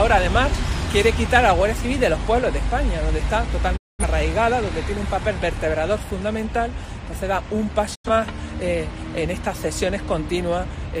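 At 3.76 s the sound fades out over about 20 ms and stays silent until 4.04 s, then again from 7.94 s to 8.10 s: a digital broadcast dropout, where the receiver muted on corrupt frames and the programme resumes later, the gap lost. The holes, roughly 210 ms and 85 ms, fit five and two lost frames. A waveform shows flat lines with short tapered edges; a spectrogram shows blank vertical bands across all frequencies.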